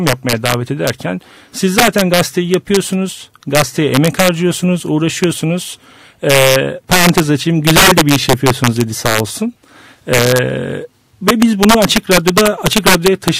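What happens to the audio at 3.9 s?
Integer overflow is present at 3.9 s, as throughout the clip: peaks driven about 9 dB past full scale wrap to the opposite sign, producing violent cracks on loud moments rather than clipping.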